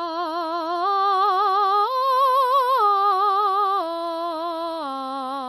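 From the first moment to the last, this music carries plainly audible damage that sounds like MP3 compression, likely at a low rate, something around 48 kbps. The top end stops dead at about 14.8 kHz, so there's no air above that. Underneath, quiet detail keeps dropping in and out from one moment to the next, giving the mix a watery, swirling texture, with metallic chirping in the bright parts and attacks that smear rather than snap.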